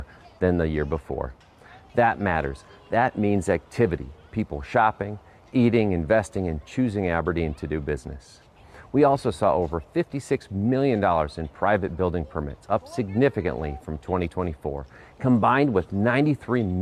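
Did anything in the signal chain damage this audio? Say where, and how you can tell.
No, nothing in the signal chain stood out as damaging this audio when I listened to it.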